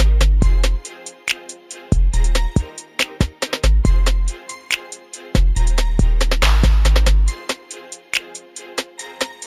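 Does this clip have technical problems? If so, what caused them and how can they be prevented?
Yes. Imaging from linear upsampling runs through the whole clip. The top of the band sounds dulled, and a faint metallic shimmer rides on sibilant and high-pitched sounds. It comes from a mirror copy of the spectrum between 8 kHz and 16 kHz, roughly 25 dB below the main sound. This fits a 16 kHz source raised to 48 kHz by joining samples with straight lines, which filters poorly. Prevent it by using a proper windowed-sinc or polyphase resampler with a steep anti-imaging filter.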